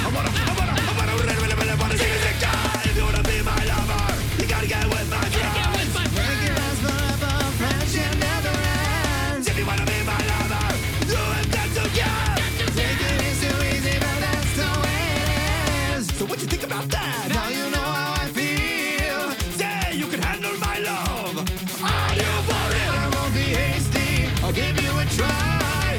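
No technical faults can be heard anywhere in this audio.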